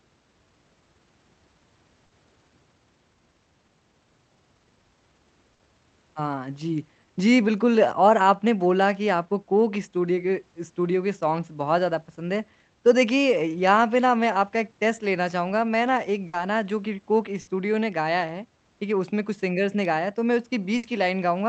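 Bursts of packet loss at 2.05, 5.53, 16.27, 17.41 and 20.77 s each conceal about 60 ms with a fading held buzz or hiss, then skip 60 ms of speech. On a spectrogram they appear as smeared, decaying bands below the 8 kHz call-codec ceiling; the waveform shows a brief dying tail and then a jump.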